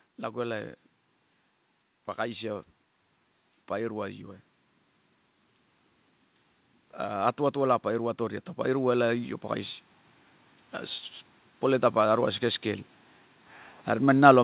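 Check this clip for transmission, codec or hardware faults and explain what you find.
One fault is present: an automatic gain rise. The band limit at 4 kHz, which points to a G.711 mu-law telephone path, is expected. From 6.99 to 9.34 s, automatic gain control treats the input as too quiet and ramps its gain up by about 5 dB, so the speech and background noise swell together.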